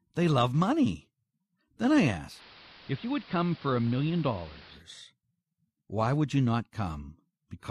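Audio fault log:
2.27–4.84 s, digital radio blending to analogue: a 0.15 s cross-fade to the AM broadcast. The spectrogram loses its upper treble because of AM's narrow band, the waveform drops by about 4 dB, and hiss about 20 dB below the signal fills the gaps.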